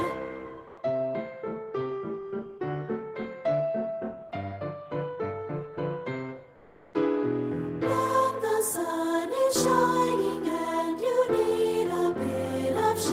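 Comfort noise in place of the background appears twice, from 0.67 to 0.77 s and from 6.55 to 6.93 s. The natural background gives way to a smooth, featureless hiss whose level shifts by about 5 dB, likely from Opus discontinuous transmission filling pauses with synthetic noise. Unlike a noise gate or dropout, the pause never falls to silence: a steady, textureless floor replaces the real background's detail until the sound resumes.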